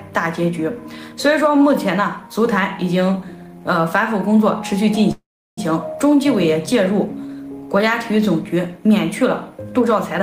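The audio has a call audio freeze from 5.11 to 5.59 s. At 5.11 s the last sound is stretched into a brief fading buzz or hiss, then about 360 ms of silence follows. At 5.59 s the audio resumes exactly where it stopped, with nothing skipped. The stall adds a gap of about 460 ms, so everything after it runs that much later. The likely cause is packets held up in transit, leaving the receiver's jitter buffer empty.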